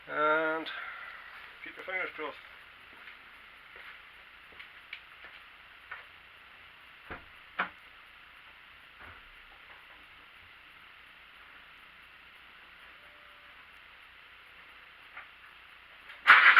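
At 1.79, 7.79, 11.78 and 13.77 s, overlap between stream segments drops 2 to 5 ms where overlapping 2-second segment time stamps were trimmed, producing tiny skips. The waveform shows an abrupt step, and a spectrogram shows a thin vertical seam at each.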